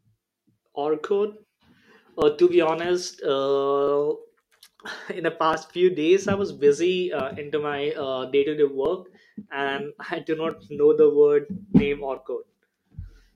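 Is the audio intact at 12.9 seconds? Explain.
Yes, the audio is intact at 12.9 seconds, with no fault present at that moment.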